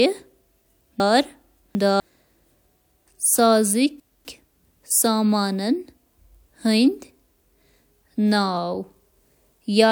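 From 1.0 to 2.0 s, the speech briefly jumbles. This is chunks out of order. The audio moves in blocks of 250 ms, and one block arrives three blocks late. It plays after the pieces meant to follow it. Nothing goes missing, but the sequence breaks, leaving three hard joins. From 4.0 to 4.5 s it happens again on a smaller scale. One block runs a single place late, so two neighbouring 250 ms pieces swap.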